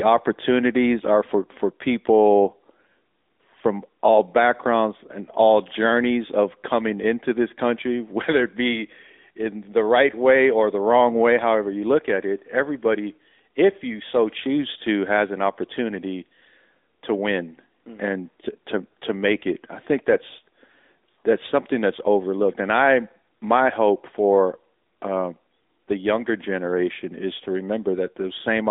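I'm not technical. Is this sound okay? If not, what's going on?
No. From start to finish, the speech went through the AMR narrowband mobile codec of older phone calls, which keeps only 250 Hz to 3.7 kHz and rebuilds the voice from a simplified model. It sounds thin, muffled and plainly buzzy and synthetic.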